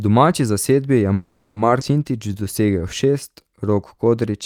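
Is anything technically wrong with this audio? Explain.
Yes. This speech clip has three timing faults, all in its middle and later part.

From 1.13 to 1.58 s there is a call audio freeze. The last sound is drawn out as a buzzy, fading tone for about 430 ms, and it never drops to true silence. Then the speech resumes where it left off with nothing lost. This likely happened because packets stalled in transit and the jitter buffer ran dry, so the receiver stretched what it had. On a spectrogram the harmonics of the final sound smear horizontally and fade. In the waveform the repeating cycles shrink without a break.

At 1.80 to 1.83 s playback skips ahead. Roughly a fifth of a second of speech is gone, and the two sides are joined through only about 10 ms of fill. This means a stretch of audio was dropped while later audio was already waiting, so later material played almost immediately. To the ear it is an abrupt jump. 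A spectrogram shows a hard vertical seam where unrelated spectral patterns meet, and the waveform shows a sudden change in envelope.

From 2.12 to 4.10 s there is a jitter buffer slow-down. The receiver padded its reserve by repeating single pitch periods and bits of pauses, adding about 201 ms. This made the speech run at 90% speed with its pitch unchanged. The speech sounds slightly drawn out, with sustained vowels. In the waveform, runs of identical repeated cycles appear. On a spectrogram, the formants and pauses look stretched along the time axis, but the harmonic spacing stays the same.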